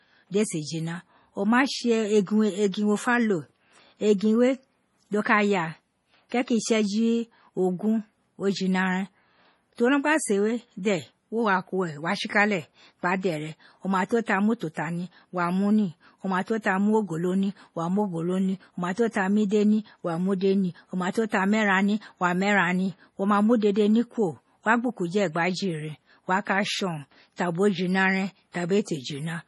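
The whole speech clip sounds watery and swirly with nothing above 11.4 kHz, most likely heavy MP3 compression at what sounds like about 32 kbps. Pre-echo shows up at 19.11, 21.13 (right after "ide ni o ma") and 21.29 s: roughly 30 ms of hiss smeared ahead of sharp attacks.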